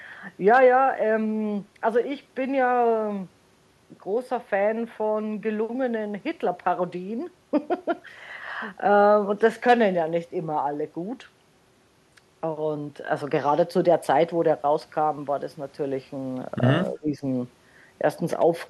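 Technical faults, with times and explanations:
16.9–17.22 s, speech suppressed in double talk: the speech dips by roughly 15 dB for about a third of a second, likely because an echo canceller mistook overlapping far-end talk for echo and ducked both. Unlike a dropout, the sound is attenuated rather than silenced.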